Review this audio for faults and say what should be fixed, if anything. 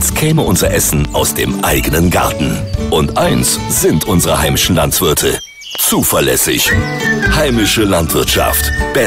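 Loud pops at 0.93–1.07 s (two), 5.75–5.77 s and 7.26–7.50 s (two), peaking about 10, 10 and 5 dB above the sound, likely voltage pulses from a plug, switch or static. Each appears as a vertical full-band stripe with a tall spike on the waveform. To prevent them, secure connectors, mute before switching and control static near the equipment.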